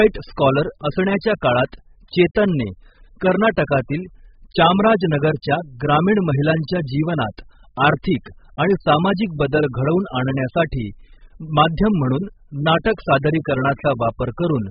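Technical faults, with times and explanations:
Throughout: AAC compression, likely heavy AAC-LC at a very low bitrate around 8 kbps. Nothing survives above 5 kHz, so the speech sounds dull and muffled, with smeared, warbling sibilants; unlike plain low-pass filtering, the remaining band itself is coarse and fizzy from starved quantisation.
4.51 s: pre-echo, a brief hiss about 10 ms long just before "चामराजनगरच्या ग्रामीण महिलांच्या जीवनात". The transform block spread noise meant for the loud onset into the quiet moment preceding it, so the hiss leads the attack rather than trailing it as a reverb tail would.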